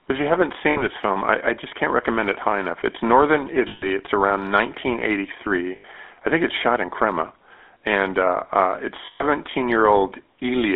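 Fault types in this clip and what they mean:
GSM full-rate codec: The whole clip has a buzzy, gravelly roughness, and the speech sits in a narrow band, from about 250 Hz up to 3.5 kHz, with nothing bright above it. The codec models the vocal tract and drives it with a sparse, regularly spaced pulse excitation instead of the real waveform, and that coarse excitation produces the grit. The damage is plainly audible and fits the 13 kbps GSM full-rate codec.
lost GSM frames: At 3.68 s, at 5.76 s just before "I think it's shot", and at 9.06 s right after "and uh uh it's", the sound freezes into a rough, metallic ringing tone. The decoder fills each gap by reusing the last good frame's settings. The first and last gaps last about 140 ms, and the middle one about 80 ms, so none is long enough to fade to silence.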